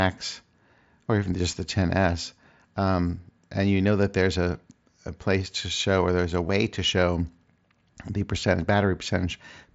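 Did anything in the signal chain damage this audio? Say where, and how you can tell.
Yes, the Bluetooth wireless link between headset and phone dropped voice packets at 6.48 s, between "show or there's a" and "to show". This is concealed Bluetooth headset packet loss. About 15 ms went missing, which fits two lost mSBC frames. The receiver filled the gap by repeating a closely matching stretch of the preceding waveform, so the loss comes through as a brief buzzy continuation rather than a clear dropout.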